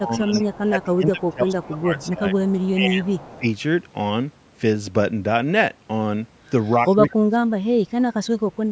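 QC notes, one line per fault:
0.00–3.45 s and 7.17–8.72 s, speech suppressed in double talk: the echo canceller likely mistook the talker for loudspeaker echo while both sides were active, and pulled its gain down. The speech dips in pieces, about 20 dB at its deepest over roughly two seconds in the first stretch, then about 35 dB over roughly one second to the end of the clip.
0.33–3.38 s and 6.65–7.10 s, echo leak: the far side's loudspeaker pickup was likely not fully cancelled and was sent back. A delayed copy of the voice follows it by 206 ms, sitting about 25 dB below the speech in the first stretch and about 30 dB below in the second. The result is a faint doubled trail behind the speech.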